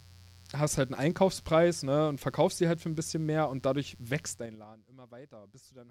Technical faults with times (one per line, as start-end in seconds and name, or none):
0.00-5.90 mains buzz